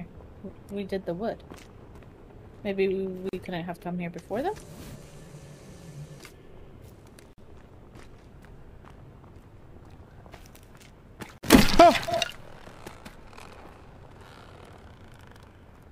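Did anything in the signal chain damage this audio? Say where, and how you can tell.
Yes. There are gaps at the joins of encoded pieces at 3.29, 7.33 and 11.38 s, every 4 s, lasting 40 to 49 ms with smeared edges. At the codec stage, separately encoded segments were joined untrimmed, keeping encoder delay and last-frame padding.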